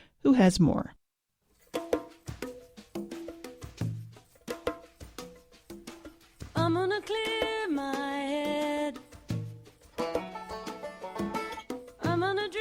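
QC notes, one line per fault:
Nothing stood out on listening.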